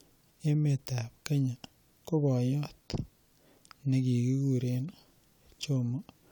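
No technical faults can be heard in this speech.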